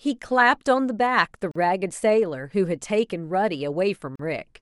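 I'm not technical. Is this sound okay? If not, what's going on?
No. The speech was saved in separate pieces and joined without trimming the silent padding, a gap at a join of encoded pieces. It leaves sudden drops of about 40 milliseconds at 1.51 and 4.16 seconds before the speech carries on.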